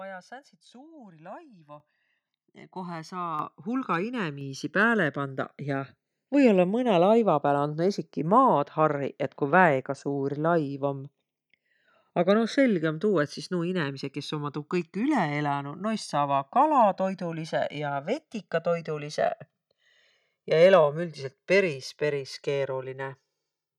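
Speech, with two faults. Throughout the clip the channels drift apart. The left and right signals behave as if captured on devices with independent clocks, mismatched by something like 150 ppm, so the delay between them creeps up to a couple of milliseconds by the end. When the channels are summed to mono, that changing delay makes comb-filter notches sweep slowly across the spectrum, giving a gradual flanging colouration. The microphone volume is also stepped up three times: at 1.8 s by about 10 dB, at 3.39 s by about 6 dB, and at 4.41 s by about 4 dB, just before "pääle pandaq ja". Each time the voice and the background noise jump in level together, instantly, with no fade. That points to the call software deciding the input was too quiet and raising the device's capture gain in discrete increments rather than smoothly.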